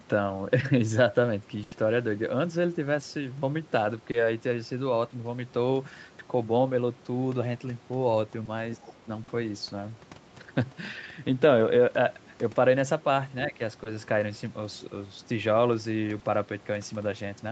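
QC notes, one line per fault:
1.63–1.73 s, burst of packet loss: a run of packets arrived too late to play, so the receiver stretched the last sound for about 80 ms, fading it into a held buzz or hiss. The speech then resumes with roughly 80 ms skipped.
4.11–4.15 s, 8.45–8.49 s, 9.23–9.29 s, 13.83–13.87 s, 16.19–16.23 s, short concealed packet loss: audio never reached the decoder in time each time, 40 ms at 9.23 s and 20 ms elsewhere. It filled each hole by extrapolating the preceding sound, heard as a brief smear or wobble.
8.77–9.07 s and 13.47–13.60 s, speech suppressed in double talk: the speech dips by around 10 dB in pieces, over about 200 ms and then about 100 ms. The likely cause is the echo canceller turning the talker down while the far side also spoke.
8.85–8.93 s, other side's voice leaking through: a scrap of a second voice sits around 25 dB under the speech, likely far-end audio from the loudspeaker that the echo canceller failed to remove, within the call's 8 kHz Opus band.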